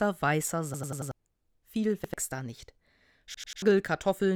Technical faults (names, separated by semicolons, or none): repeated buffer